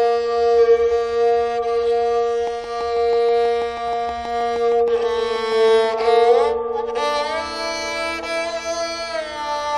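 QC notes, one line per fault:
2.47–6.35 s, train of clicks: about thirty same-shaped pops at a regular 6.2 per second, about as loud as the sound, likely interference injecting pulses.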